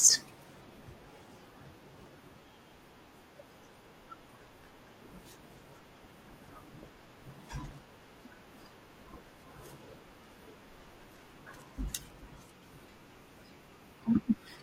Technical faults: corrupt frame decoded

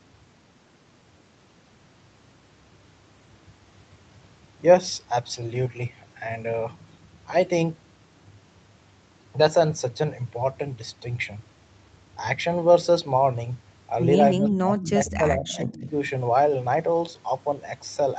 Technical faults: speech suppressed in double talk; echo leak

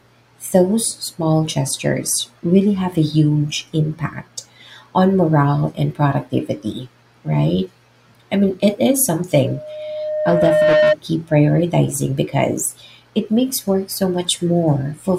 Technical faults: loudspeaker feedback squeal

